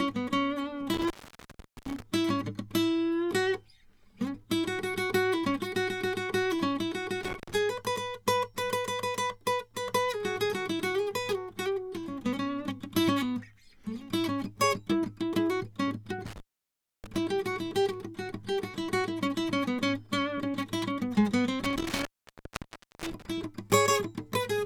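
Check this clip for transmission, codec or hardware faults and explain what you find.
The music repeatedly drops out from an intermittent contact, a loose cable or plug opening briefly. It happens at 0.94–2.02 s (open about 0.76 s), 7.23–7.55 s (0.15 s), 16.26–17.18 s (0.64 s) and 21.64–23.44 s (0.98 s). Each gap has crackle at its edges and faint hiss between. On a waveform the signal collapses to a near-flat line, and on a spectrogram the gaps show as thin broadband streaks bracketing dark, nearly empty stretches.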